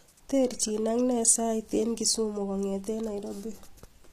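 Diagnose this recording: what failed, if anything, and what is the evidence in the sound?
HE-AAC compression, throughout the speech, at the codec stage: the treble is gritty and lispy on s sounds, and nothing sounds above 14.9 kHz. It is likely spectral band replication rebuilding the top from copied lower bands, which fits roughly 24 kbps.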